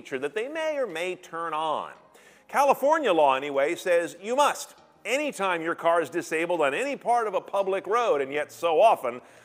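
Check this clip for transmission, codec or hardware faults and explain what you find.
No transmission, codec or hardware faults can be heard anywhere in the clip, and the signal arrives intact with nothing that points to a problem in the chain that carried or recorded it.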